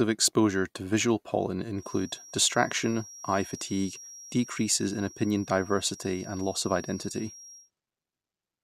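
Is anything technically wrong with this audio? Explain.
Yes. From 1.73 s to 7.71 s there is a feedback whistle, most likely from the loudspeaker-to-microphone loop sitting right at the edge of feedback, where the gain at one frequency is just high enough to keep ringing without climbing into a howl. The result is a thin, steady tone at 5.6 kHz behind the speech, about 20 dB below it, whose level slowly swells and fades for the whole six seconds.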